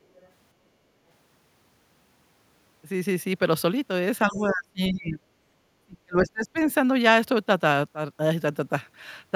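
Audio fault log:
0.15–0.28 s and 4.29–4.52 s, other side's voice leaking through: the echo canceller likely left part of the far end's loudspeaker playback in the microphone signal, so brief scraps of a second voice sit faintly under the talker, about 35 dB down at first and about 25 dB down later.
4.25–5.26 s and 5.83–6.59 s, speech suppressed in double talk: with both sides talking at once, the echo canceller likely could not separate the talker from the echo and attenuated everything, so the voice sinks by roughly 30 to 35 dB at its deepest, over about a second and then most of a second.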